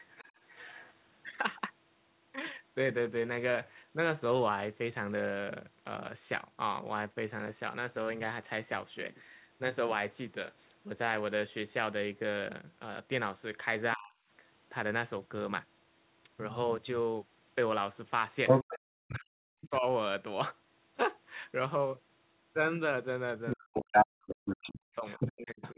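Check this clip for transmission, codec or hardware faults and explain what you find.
Two echo-canceller faults are present in this speech clip.

Other side's voice leaking through: 0.00 to 0.93 s, 18.47 to 19.19 s, 19.61 to 19.69 s, and 23.46 s to the end. A second voice comes through alongside the talker. It is faint, about 20 dB down, at the start and at 19.6 s. It is roughly as loud near 23.5 s and louder around 18.5 s. The likely cause is loudspeaker playback that the echo canceller left in the microphone signal.

Speech suppressed in double talk: 13.95 to 14.15 s, 18.68 to 18.83 s, 19.18 to 19.86 s, and 23.56 s to the end. The talker's level collapses by roughly 35 to 40 dB in these spans. This likely happens because the canceller cannot tell the talker from the echo when both sides speak at once, so it turns down everything.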